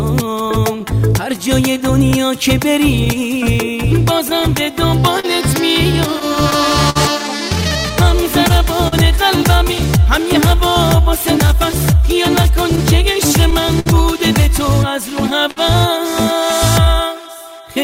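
The sender's clock runs roughly 4% slower than the receiver's, so this clock drift between sender and receiver keeps draining the jitter buffer for the whole clip. From 0.42 s to 17.59 s, repeated timing corrections stretch the audio to 98% speed, adding about a third of a second in uneven steps. Between 2.11 s and 6.97 s, about ten lost or late packets leave scattered short gaps, each patched by extending the previous sound, giving brief smears or ticks up to about 50 ms. At 8.88 s, a short stall from a late packet empties the buffer, holding the sound 41 ms too long. From 10.70 s to 13.88 s, roughly seven more scattered short gaps add similar small ticks and smears. At 15.51 s, another late packet stalls playback, stretching the sound for 56 ms before it resumes.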